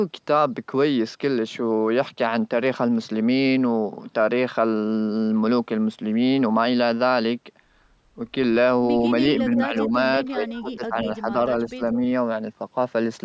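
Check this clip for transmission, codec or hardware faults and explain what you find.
There's one problem here, and it shows up three times near the end: speech suppressed in double talk, at 9.45 to 9.95 s, 10.2 to 11.49 s and 11.69 to 12.01 s. The likely cause is an echo canceller that couldn't tell this talker apart from loudspeaker echo while the far end was speaking, so it pulled both down. The first pass is only a slight dip, but the later two cut in by around 15 dB. The call microphone processing is in the chain too, with nothing above 8 kHz.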